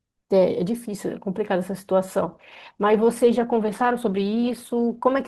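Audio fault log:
2.22–5.27 s, adaptive stream at a lower bitrate: the audio suddenly turns grainy as codec artefacts rise, with no gap, which fits the stream switching from about 64 to 16 kbit/s Opus. Unlike packet loss, nothing drops out, and the degraded quality holds steady until the end.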